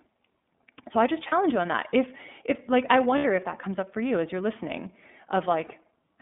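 The whole clip runs through the iLBC codec. Each 30 ms frame is coded on its own, without help from the frame before. The sound is confined to a narrow telephone band, roughly 200 Hz to 3.6 kHz. Nothing above that survives, so the speech lacks air and sibilant detail. The coding damage is plainly audible as a rough, slightly synthetic texture. The sound points to the 13.33 kbps mode.

Lost iLBC frames occur three times: from 1.29 to 1.33 s, from 3.18 to 3.25 s, and from 5.66 to 5.73 s. Packets went missing, and the decoder filled each gap by repeating the last pitch cycle blended with noise. The first and third gaps cover about 30 ms. The second covers about 60 ms, so its patch lasts longer. Each gap sounds like a brief held vowel, slightly buzzy or breathy. Normal speech resumes right after.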